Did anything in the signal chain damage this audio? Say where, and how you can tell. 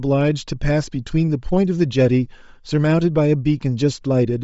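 Yes. The damage sits at the codec stage and runs through the whole speech clip. The upper spectrum has a breathy, grainy edge that is plainly audible. This is likely Bluetooth LC3 compression. LC3 codes short transform frames, and here the timing fits 7.5 ms frames. When bits run short, it zeroes much of the high band and fills the gaps with noise. That noise fill is the grain you hear. The amount of damage points to a low bitrate near 32 kbps.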